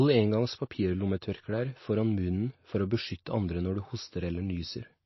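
From start to finish the speech has nothing above 5.8 kHz, and the remaining band carries plainly audible coding damage, likely MP3 compression at a bitrate near 26 kbps. Starved of bits, the encoder cuts the treble at a fixed point and drops weaker frequency lines, which flicker from frame to frame. A simple low-pass filter would also remove the top, but it would leave the lower band clean rather than unstable and swirling like this.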